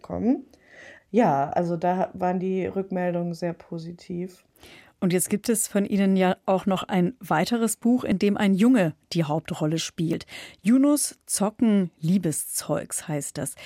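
A dropped buffer (overrun) shows up at 8.12 s, just before "dem ein", and again at 10.13 s. Each is a short jump where the speech skips forward with no gap of silence, about 10 ms missing at the first point and around 30 ms at the second. The likely cause is that the recording software fell behind and the hardware overwrote audio it had not yet collected, so the sound on either side is spliced directly together.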